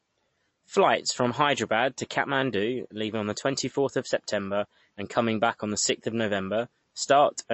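The whole thing has a hard ceiling around 8 kHz and a watery, swirly edge on the speech, likely MP3 compression at a starved bitrate, somewhere near 35 kbps.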